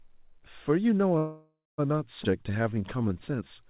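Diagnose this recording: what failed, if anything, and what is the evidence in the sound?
From 1.18 to 1.8 s the sound stretches into a fading buzz, then about 230 ms of silence, resuming intact. This call audio freeze likely came from delayed network packets starving the jitter buffer.

At 2.24 s the audio jumps forward, losing roughly 150 ms with almost no gap. This skip ahead happened in the network or jitter buffer, which dropped a stretch of audio while later audio was already waiting.

From 2.31 to 3.49 s the sound drags at unchanged pitch, running at 87% speed. This jitter buffer slow-down repeated pitch periods, adding 156 ms to rebuild its reserve.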